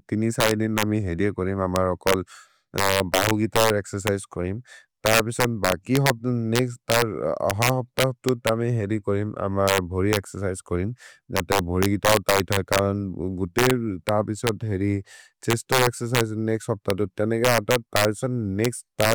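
It's a speech recording with integer overflow running all the way through. The signal was pushed about 6 dB past full scale, and instead of being limited the loudest peaks wrap around to the opposite sign. Only a small fraction of samples, something like half a percent, go over, but each one swings across the whole range. So the louder moments snap with harsh cracks, far nastier than ordinary clipping.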